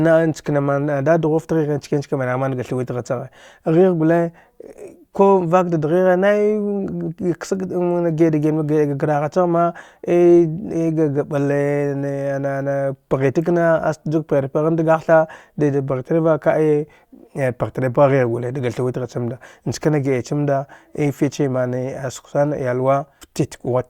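No technical faults detected.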